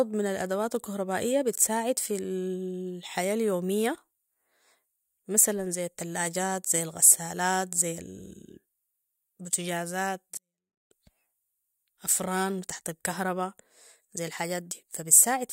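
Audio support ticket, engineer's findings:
24-bit alignment error (too quiet), 10.37–10.91 s. Speech stays clean but drops about 48 dB, near-inaudible. 24-bit samples packed in low bytes of 32-bit word, read as 32-bit. Waveform collapses to flat line; spectrogram keeps shape, far fainter.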